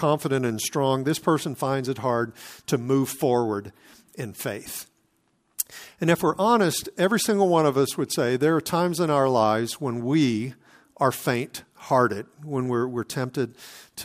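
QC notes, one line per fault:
Nothing stood out on listening to the speech in this recording.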